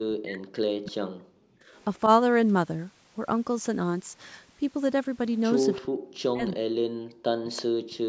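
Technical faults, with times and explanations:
0.00 to 1.48 s, 5.77 to 6.03 s and 6.30 to 8.08 s, speech suppressed in double talk: the voice dips hard, by roughly 40 dB at its deepest, and drops out in pieces. That's likely an echo canceller treating overlapping talk as echo and ducking everything while the far side speaks.
1.76 to 2.00 s, 5.74 to 5.81 s and 7.56 to 7.62 s, echo leak: short, faint scraps of the voice come back about 339 ms late, roughly 35, 25 and 20 dB below the speech. Likely a loudspeaker's pickup slipping past the far end's echo canceller and being sent back.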